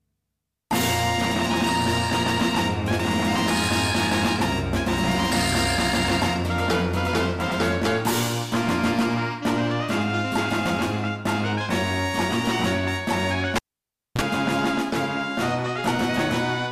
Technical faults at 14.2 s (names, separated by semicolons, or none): cable pulled and plugged in